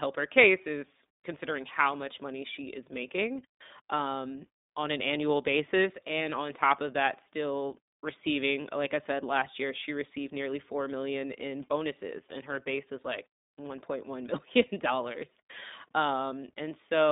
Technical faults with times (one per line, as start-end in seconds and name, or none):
0.00-17.11 iLBC codec